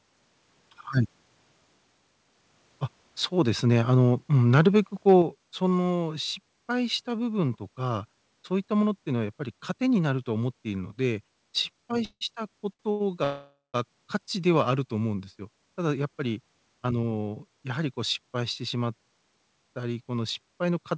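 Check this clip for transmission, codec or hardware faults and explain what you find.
Four kinds of fault occur in this speech: two overloaded peaks, a gain step, two long freezes and two short stalls. The clean cut at 8 kHz fits a G.722 call path at 64 kbps.

Microphone overload occurs from 4.54 to 4.68 s and from 5.08 to 5.16 s, with peaks about 4 dB and about 2 dB over the converter's limit. The likely cause is input gain set too high, flattening the waveform tops. A small share of samples is clipped, giving a harsh, crackly edge.

A microphone volume step-down lands at 5.22 s, right after the second overload. The level drops by about 5 dB in one jump, likely because the call software reduced the device's input gain after detecting clipping. Speech and background fall together.

Call audio freezes occur from 12.05 to 12.23 s and from 13.24 to 13.76 s, inserting 162 ms and 500 ms. The likely cause is packets held up in transit, emptying the jitter buffer. 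The last sound continues as a fading buzz, then silence for 80 ms and 170 ms. Speech then resumes with nothing lost.

Short stalls from late packets occur from 12.73 to 12.81 s and from 12.91 to 13.02 s, adding 63 ms and 87 ms. The receiver stretched the last sound while waiting for each packet, so a sound is held too long with a slight buzz or dip, and nothing is skipped.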